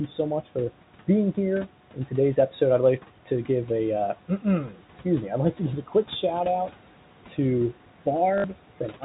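All the way through there are noise suppressor artifacts: the suppressor pulls the steady room noise down by about 12 dB, frame by frame, so the background dips between phrases and swells back under the talking.

At 4.69 to 4.81 s, just before "me I'd like to", you get speech cut by the noise suppressor. It mistook a quiet stretch of the talker for noise and turned it down by as much as about 11 dB for roughly a tenth of a second, so that bit sounds swallowed and faint.

Then at 8.38 to 8.44 s there's packet loss with the last packet repeated. About 60 ms went missing, which fits three 20 ms packets, and the receiver looped the last good one to fill the gap, giving a short buzzy robotic stutter.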